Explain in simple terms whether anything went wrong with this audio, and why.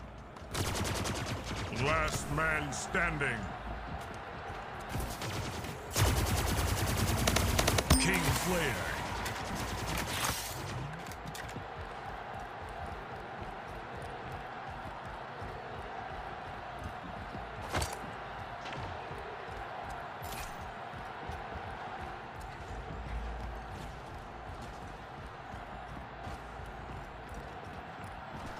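Clock drift between sender and receiver runs through the whole clip: the sending device's clock is about 1% slower than the receiving one, so the sound steadily falls behind.

Repeated timing corrections, from 0.28 s to 28.59 s: the receiver keeps stretching by repeating tiny pieces, adding roughly 0.4 seconds overall, heard as faint hiccups and a slightly uneven pace.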